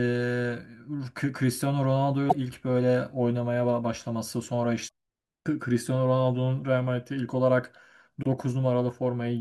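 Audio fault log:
2.26–2.33 s, 4.85–4.89 s, 8.19–8.26 s: damaged data in a compressed stream. Each is a brief glitch of 46 to 70 ms that cuts into the speech. Corrupted bytes make the decoder misread those frames and lose sync until it finds the next valid header. On a spectrogram each appears as a short vertical disturbance unrelated to the speech harmonics. On the waveform the amplitude abruptly shifts in character.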